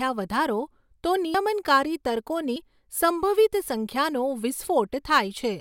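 Samples likely overwritten before the program collected them, a dropped buffer (overrun), make the speech jump ahead at 1.34 s after "વધારો તો" (about 70 ms gone), then 2.56 s and 4.67 s (about 20 ms each).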